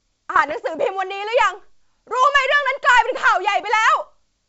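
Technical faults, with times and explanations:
0.36 to 0.53 s, bit errors on an ADPCM link: flipped bits corrupt the decoder's step size and predictor, so each error rings on briefly as pops and rough bursts with quick level jumps, unlike steady codec hiss, with a bit error rate around a third of a percent, while the G.722 wideband coding underneath stays clean.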